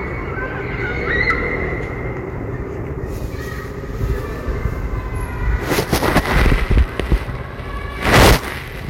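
Everyday sound with hard clipping in three places: briefly at 1.21–1.31 s, overdriven by about 3 dB, then 5.72–7.14 s at about 12 dB and 8.05–8.37 s at about 18 dB. The peaks exceed the stage's limit and are cut flat, adding high harmonics heard as a harsh, fuzzy crackle.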